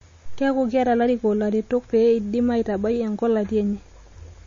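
Heavy lossy encoding, most likely MP3 compression, runs through the whole recording. The encoder seems to have been starved of bits, which fits a low bitrate of around 32 kbps, so it discarded all treble above 7.2 kHz and zeroed weaker frequency lines that then flicker in and out between frames. The speech therefore sounds dull and clearly processed, with a watery, swirling texture, metallic chirps on s sounds, and consonant onsets smeared rather than crisp.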